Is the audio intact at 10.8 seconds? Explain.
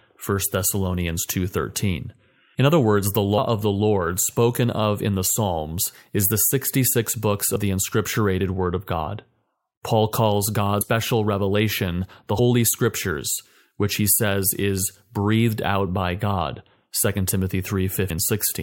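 No. Compressed frames are skipped at 10.8 s. Whole blocks of the encoded speech never reach the output, either because they are missing from the stream or because the decoder rejected them as corrupt, so playback jumps forward by roughly 150 ms. That jump fits about seven frames of 23.2 ms. Because adjacent frames overlap, the splice comes out as a short smeared blip instead of a sharp click, and a fragment of the speech simply disappears.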